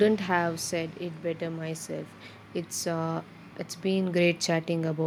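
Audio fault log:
0.05 to 0.94 s, automatic gain falling. The speech starts loud, then sinks by about 5 dB over less than a second. The gain control judged the input too hot and eased its gain down. Voice and background drop together, so the whole level fades.
2.82 to 5.02 s, automatic gain rising. The speech and its background swell together by about 8 dB over roughly two seconds. The gain control judged the input too quiet and raised its gain slowly. Nothing in the sound itself gets louder; the level is being pushed up.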